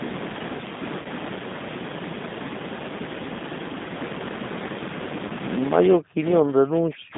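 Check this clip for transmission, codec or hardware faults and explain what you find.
Three kinds of fault are present: narrowband codec coding throughout, two concealed packet losses, and a late stretch where the speech is strongly attenuated.

G.729 codec, throughout: The sound is confined to roughly 150 Hz to 3.7 kHz, which fits an 8 kbit/s G.729 stream. Its pulse-based excitation makes the speech plainly rough and synthetic. On a spectrogram, energy stops sharply near 3.7 kHz.

VoIP packet loss concealed by the speech codec, 1.02 to 1.08 s and 5.27 to 5.33 s: About 30 ms of audio went missing each time. The decoder extrapolated the last frame into a brief buzzy tone or coloured noise that fades. On a spectrogram, smeared harmonics appear, followed by weak, distorted frames.

Speech suppressed in double talk, 5.97 to 7.16 s: The speech dips and breaks up for roughly a second, falling by around 40 dB at its deepest. 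The likely cause is an echo canceller ducking the near talker during simultaneous talk. On the waveform, the envelope collapses in chunks.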